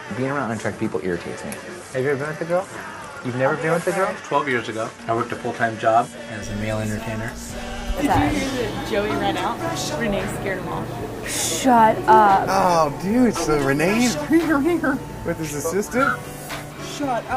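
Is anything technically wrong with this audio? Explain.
Yes. From 0.0 to 6.42 s the sound is duller, with nothing above 11.6 kHz, and then it clears up with no gap. The input was likely switched to a poorer device, one with a narrower band. Its faint background noise sits far below the signal. The level barely changes.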